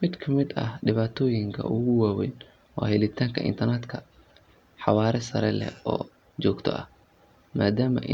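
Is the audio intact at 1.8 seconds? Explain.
Yes, at 1.8 seconds the speech runs on without any dropout, click, distortion or other technical fault.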